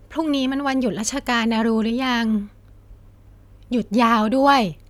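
Nothing goes wrong anywhere in this bit of speech, so there's no fault to point to at any moment.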